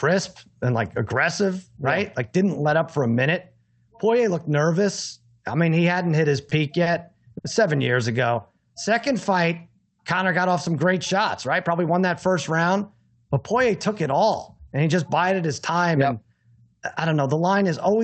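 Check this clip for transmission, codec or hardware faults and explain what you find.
Three kinds of jitter-buffer fault appear in this speech, carried over a WebRTC call path whose top end stops near 8 kHz, which fits Opus at around 32 kbps.

Short stall from a late packet, at 6.49 to 6.53 s and 7.38 to 7.46 s: packets arrived late and the buffer emptied, so the receiver stretched the last sound for 20 ms and then 60 ms. Nothing is lost, but a sound hangs on briefly.

Jitter buffer slow-down, 8.13 to 9.21 s: rebuilding its reserve, the receiver repeated pitch periods, adding 84 ms. The speech plays at 93% speed with unchanged pitch and sounds drawn out.

Jitter buffer speed-up, 11.34 to 12.01 s: with excess audio queued, the receiver trimmed pitch periods, about 70 ms in all. The speech runs at 110% speed with unchanged pitch and sounds hurried.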